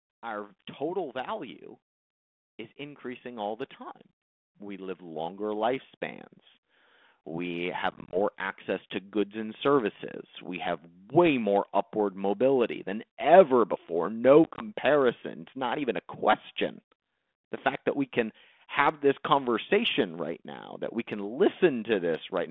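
From 0.05 s to 10.78 s, automatic gain rising lifts the whole signal by about 13 dB, voice and background noise swelling together until just before "way more upward mobility". The control judged the input too quiet and kept raising its gain. A waveform envelope widens steadily across that span.

Packet loss on an ADPCM call hits at 7.91 to 8.17 s, with about 110 ms missing across 220 ms, and at 14.44 to 14.62 s, with about 70 ms missing across 160 ms. Each gap lasts no more than 20 ms. The spectrogram shows sharp-edged vertical blank slots. After each gap the decoder's predictor and step size no longer match the sender's, so speech resumes slightly distorted before settling. The narrow line band and texture fit 32 kbit/s G.726 coding.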